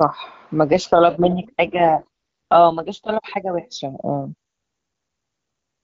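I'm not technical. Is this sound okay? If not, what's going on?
No. From 0.68 to 3.14 seconds there is an AMR rate drop. The phone network briefly switched the speech to a much lower quality setting. The voice turns rougher and more robotic, but it doesn't cut out. At 3.14 seconds it sounds clear again.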